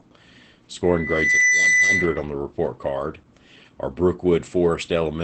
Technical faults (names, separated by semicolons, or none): Opus voice compression; loudspeaker feedback squeal